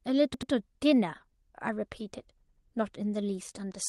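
At 0.34–0.51 s and 2.48–2.65 s, a repeated buffer stutters: one roughly 85 ms chunk, which fits a 4096-sample buffer, plays three times, showing as identical spectrogram blocks with hard vertical joins.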